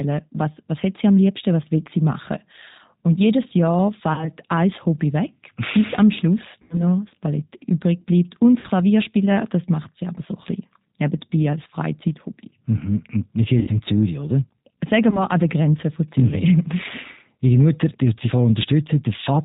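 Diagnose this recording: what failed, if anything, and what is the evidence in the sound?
Codec stage: the G.729 codec at 8 kbit/s runs throughout. The spectrogram is empty above 4 kHz, and the pulse-based excitation makes the speech plainly rough and synthetic.

Network stage: VoIP packet loss concealed by the speech codec occurs at 4.14–4.31, 6.62–6.83, 8.60–8.68, 13.59–13.72 (after "wir sind") and 15.10–15.24 s (before "an der"). Gaps of about 20–80 ms are filled with a buzzy tone or coloured noise whose waveform envelope decays, and the speech stays weak briefly after each gap.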